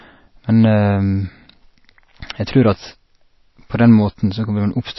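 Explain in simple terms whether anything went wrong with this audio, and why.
Something did go wrong: the speech sounds dull and plainly watery all the way through, with nothing above about 5.8 kHz. That's likely MP3 compression squeezed too hard, chopping the treble and letting faint detail flicker in and out, so s sounds turn swirly.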